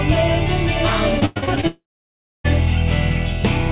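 From 1.2 to 1.65 s the sound turns choppy and robotic, with six short holes patched over. This is repeated packet loss, covering about half the stretch and with gaps up to 102 ms. Then from 1.67 to 2.46 s a brief buzzy continuation fades into about 0.64 s of silence, likely a long network dropout whose audio is simply missing when sound returns.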